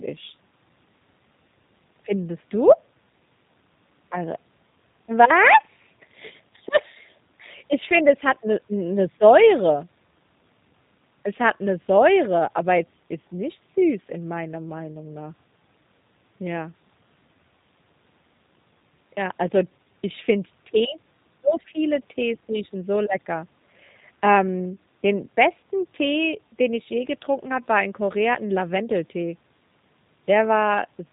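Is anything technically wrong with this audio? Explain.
Yes. Throughout, the speech carries plainly audible G.729 codec damage, likely G.729A, consistent with 8 kbit/s: a pulse-based synthetic rebuild gives rough, synthetic voicing, and a spectrogram shows nothing above 4 kHz.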